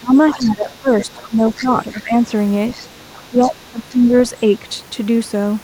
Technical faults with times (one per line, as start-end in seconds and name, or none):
0.00-2.13 speech suppressed in double talk
0.40-2.00 other side's voice leaking through
2.69-3.50 other side's voice leaking through
3.30-4.12 speech suppressed in double talk
4.01-4.40 other side's voice leaking through